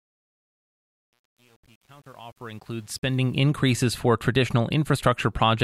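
From 0.0 to 3.38 s, the fade-in passes through a gain stage that keeps too few bits and adds no dither, pointing to about 9 bits, so this is truncation distortion on a fade. At the quietest levels the waveform collapses into coarse steps, and the speech sounds gritty, worst from 0.0 to 2.84 s, before the smooth fade-in reaches full level.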